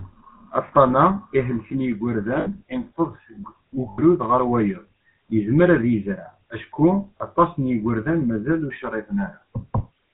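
GSM full-rate codec, throughout: the speech is modelled as a vocal-tract filter fed by sparse regular pulses, which fits 13 kbps full rate. It is band-limited below 4 kHz and plainly buzzy and gravelly.

Lost GSM frames occur at 0.68–0.73 s, at 2.40–2.48 s just before "ineṭṭeḍ seg", at 3.90–3.99 s between "ineṭṭeḍ seg" and "ɣer wayeḍ yezmer ad", at 7.18–7.21 s between "yezmer ad yezreɛ acku" and "aṭas n yigerdan mazal", and at 9.78–9.81 s. Missing frames, 20 to 80 ms long, were filled by repeating the last good one, giving a brief rough, metallic ring.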